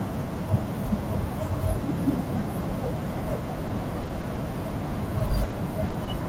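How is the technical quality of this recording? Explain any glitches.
The speech has repeated packet loss (robotic sound) from 3.67 to 4.38 s and from 5.19 to 6.09 s. Packets kept arriving late or not at all, so the decoder stretched the last sound over each hole, leaving choppy stretches with gaps up to 20 ms and 30 ms. On a spectrogram, harmonics freeze into flat smears broken by thin vertical gaps. The waveform shows repeated, copied-looking cycles and brief dropouts.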